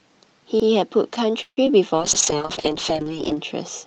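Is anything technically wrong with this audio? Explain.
Yes, there are four kinds of fault in this speech clip.

Repeated buffer, at 0.60 to 0.68 s and again at 2.13 to 2.22 s: each time a short stretch of about 85 ms is heard twice in a row, with a hard join where the copy begins, giving a brief stutter. The playback device did not receive fresh audio in time and replayed the block it already held, which fits a 4096-sample buffer. Nothing is lost. The repeat only pushes the rest of the sound later.

Call audio freeze, from 1.42 to 1.59 s: the sound hangs, the last fragment stretching into a fading buzz that drops to silence for about 60 ms before the speech resumes exactly where it stopped. About 151 ms were filled in, none of the real audio is missing, and everything afterward runs 151 ms later. The likely cause is packets stalling in transit so the jitter buffer emptied and the receiver had to improvise.

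Short concealed packet loss, at 1.65 to 1.68 s: a tiny smear or wobble where about 20 ms of the call never reached the decoder. The receiver covered roughly 11 ms of that gap by extending the preceding sound, voiced material from its pitch and unvoiced material as shaped noise, then blended back into the genuine signal. A short consonant-like detail can disappear in a hole this size.

Call bitrate drop, from 1.96 s to the end: the speech turns rough, watery and duller. The call's bandwidth estimate fell and the Opus encoder was throttled from 32 kbps to 6 kbps, so it spends far fewer bits on each frame, quantises more coarsely and narrows the upper range. Before this point the Opus path itself carries speech up to about 8 kHz with only its usual coding noise.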